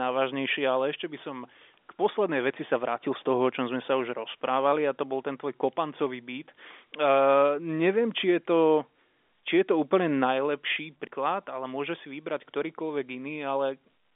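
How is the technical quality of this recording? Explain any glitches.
One glitch stands out in this telephone-band speech, which has nothing above about 3.7 kHz. At 11.07 s, between "je to úplne najlepší" and "ale môže si vybrať", there is a CD skip: the laser jumped to another turn of the disc's spiral, so playback mutes for roughly two milliseconds, ticks, and resumes from a different point.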